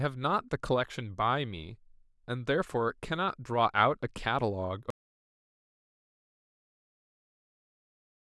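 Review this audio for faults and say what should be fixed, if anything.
Audio dropout to silence from 4.90 s to the end: the speech cuts off mid-flow into silence with no room tone, likely a lost input while recording continued. Monitor input levels and secure connections so any signal loss is caught and re-recorded.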